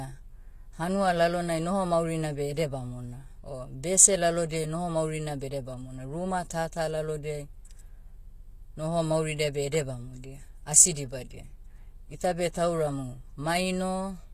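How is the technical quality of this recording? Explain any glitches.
The recording is held back by plainly audible codec damage throughout. The upper range sounds synthetic, with s sounds coming out gritty, metallic or lisped, and nothing at all above about 14.9 kHz. This is likely HE-AAC compression at a low bitrate, consistent with roughly 24 kbps. Only the lower spectrum is actually coded, while the treble is rebuilt by copying lower bands upward under a coarse envelope. The regenerated harmonics don't line up with the real ones, which gives the sibilance that artificial edge.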